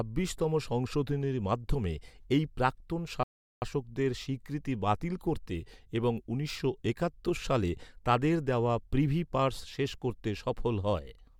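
At 3.23 s, right after "সংশোধনীর মাধ্যমে এই প্রাক্তন", the speech drops into silence for about 0.39 s, a rebuffering stall. The player ran dry of downloaded audio and waited for more before carrying on. It resumes at 3.62 s with "স্বীকৃতি বাতিল করতে এবং", picking up exactly where it left off. That is what separates it from a dropout or packet loss: no sound is skipped, the gap only adds time.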